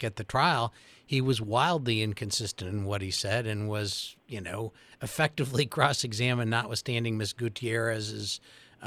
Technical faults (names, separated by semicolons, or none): none